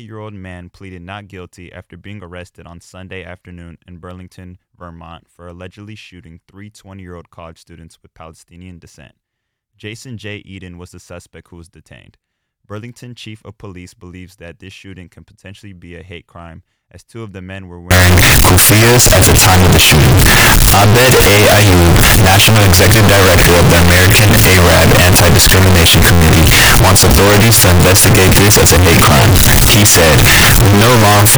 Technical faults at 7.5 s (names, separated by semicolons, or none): none